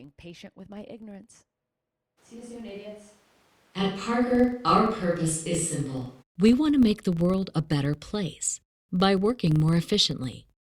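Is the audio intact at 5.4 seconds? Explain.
No. From 2.19 to 6.21 s there is a switch to a distant microphone. The sound turns suddenly roomy and hollow, with thinner bass and faint background noise. The level stays roughly the same. The likely cause is a lost close-microphone signal.

A filter restarted on every block also runs throughout. Each block starts from silence, so a tick opens it. This gives a 23.4 Hz buzz, which fits a 2048-sample block.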